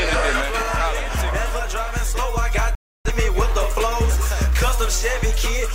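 At about 2.75 s there's a digital broadcast dropout. The sound is pulled down over roughly 3 ms, so it's almost a hard cut, and stays silent until about 3.11 s. The receiver has lost the signal or stopped getting frames that pass their checksum, so it mutes until clean data arrives. When the sound comes back, roughly 0.3 s of programme is simply gone, which fits a run of about seven lost frames.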